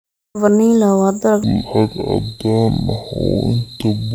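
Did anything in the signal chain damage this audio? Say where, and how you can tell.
Yes. From 1.44 s to the end, the speech drops abruptly into a slow, deep drawl. This is a section at the wrong speed. It runs at 0.545 times its proper rate, so pitch falls with tempo, roughly ten semitones, close to an octave down. The first part sounds natural, so the fault sits downstream of capture. The likely cause is an editing or playback stage that clocked this section at the wrong sample rate.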